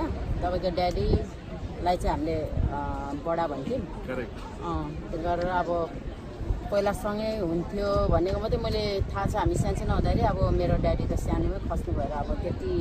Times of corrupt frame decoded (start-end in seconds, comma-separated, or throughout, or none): 5.14-5.18